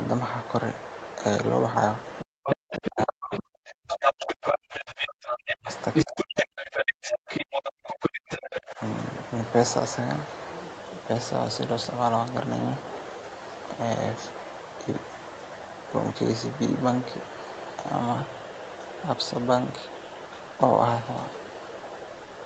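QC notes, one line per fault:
2.19–3.4 s and 3.9–8.61 s: other side's voice leaking through. A second voice runs under the main talker at roughly equal loudness. This likely comes from the far end playing on a loudspeaker, with the microphone picking it up and the echo canceller failing to remove it.
2.24–5.7 s and 6.04–8.8 s: speech suppressed in double talk. While that second voice is present, the main talker sinks sharply, by about 40 dB at the deepest, likely because the canceller cannot separate the two voices and turns both down.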